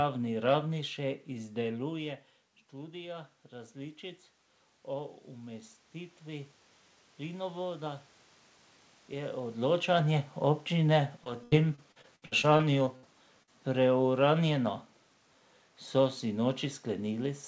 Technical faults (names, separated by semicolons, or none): repeated packet loss (robotic sound); burst of packet loss